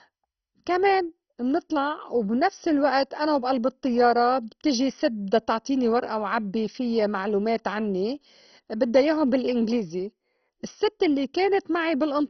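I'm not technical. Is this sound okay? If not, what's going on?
No. All the way through, the speech sounds dull and muffled, as if heard through a blanket, with a gurgling, grainy roughness on top. Nothing is left above about 6.1 kHz, so the crisp edges of consonants are gone. The likely cause is heavy MP2 compression: the format splits the sound into many narrow slices and, when squeezed hard, switches the upper slices off and stores the rest coarsely, so they flicker and churn.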